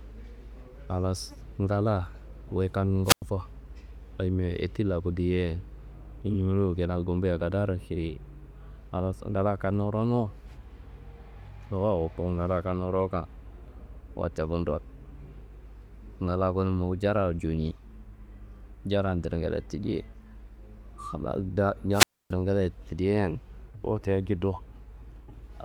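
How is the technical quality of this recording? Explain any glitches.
The recording has two wireless microphone squelch dropouts, at 3.04 to 3.23 s and 21.91 to 22.33 s. The analogue FM radio link weakens, a short burst of hiss rises, then the receiver's squelch mutes the output for about 99 ms and then 275 ms. On a waveform these are flat near-zero gaps; a spectrogram shows broadband noise just before each blank column.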